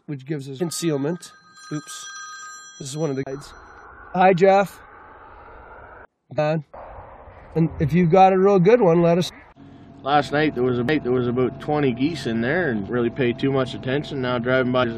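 At 0.59 s there is damaged data in a compressed stream. Corrupted bytes made the decoder misread frames and hunt for the next header. It comes through as a brief chirp, click or hole. The same fault returns at 6.37 s, from 9.28 to 9.30 s, at 12.88 s, and from 14.83 to 14.85 s.

From 3.23 to 3.27 s a CD skip occurs. The laser jumped to another turn of the spiral, muting for about 30 ms before resuming elsewhere. A second skip at 10.88 s mutes for roughly 2 ms, then the sound jumps.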